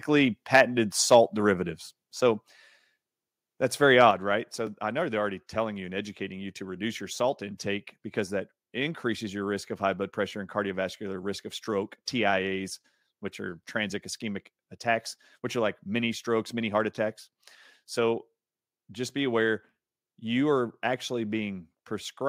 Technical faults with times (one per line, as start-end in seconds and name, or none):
0.54-0.61 microphone overload
1.12-1.15 microphone overload
2.04 microphone volume stepped down
4.00-4.06 microphone overload
4.11 microphone volume stepped down
4.67 overlapping chunks
19.69 overlapping chunks